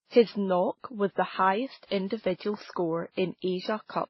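Throughout the speech, nothing is heard above 5.8 kHz, and the different artefacts of several codecs are heard together. That stack of unlike artefacts, rather than one codec's single signature, marks transcoding between lossy codecs, likely a low-bitrate MP3, HE-AAC and WMA chain.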